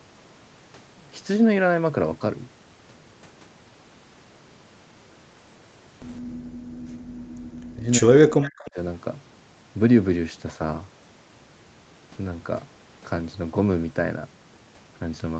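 From 6.23 to 6.4 s, an echo leak, likely from an echo canceller missing part of the loudspeaker pickup, sends back a faint copy of the speech about 165 ms late and roughly 30 dB down. Overlapping it, from 6.3 to 7.34 s, the echo canceller gates the background: it turns the microphone down hard, so the room sound drops by about 40 dB for roughly a second before returning. From 7.62 to 8.78 s comes speech suppressed in double talk, likely because the canceller could not separate the talker from loudspeaker echo while both sides spoke. The voice dips by as much as roughly 40 dB and breaks up for about a second. Within that stretch, from 8.43 to 8.71 s, a second echo leak returns a louder copy, around 20 dB below the speech and delayed by 237 ms.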